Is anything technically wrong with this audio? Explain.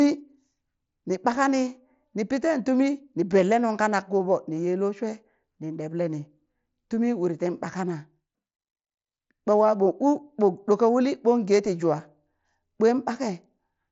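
No, nothing is technically wrong with this audio.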